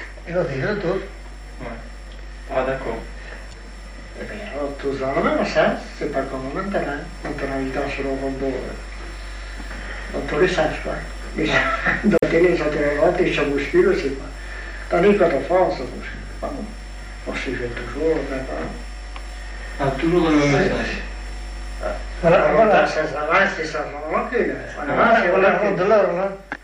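Damaged data in a compressed stream breaks the audio at 3.49 to 3.53 s and again at 12.16 to 12.24 s. The decoder hits corrupted bytes, misreads or discards those frames, and loses sync until it finds the next valid frame header. The sound glitches briefly, then carries on. MP3 compression is plainly audible throughout the clip. Quieter detail swirls and warbles as weak frequency components flicker in and out between frames. Sharp attacks sound smeared, and bright, hissy sounds pick up a metallic edge. This pattern fits a low bitrate of around 64 kbps, which is the likely cause: the encoder has too few bits and keeps only what its hearing model ranks as most important.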